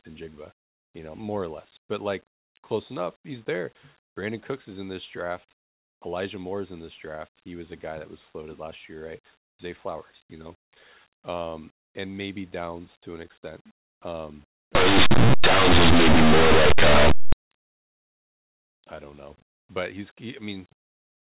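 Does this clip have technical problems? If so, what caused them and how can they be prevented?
Yes. Right after "to an extent um", from 14.75 to 17.33 s, the speech turns into loud, harsh distortion. It sounds like linear audio read as companded: plain linear 8-bit samples were run through a mu-law expander as if they were G.711 codes. Small values just to one side of zero become the biggest outputs, while those on the other side stay tiny, so quiet passages blow up into crunchy noise. To prevent it, tag the format correctly and make sure the decoder matches how the samples were actually written.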